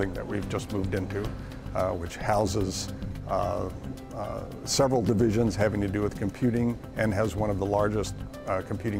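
Listening closely, nothing in the audio stood out as a technical fault.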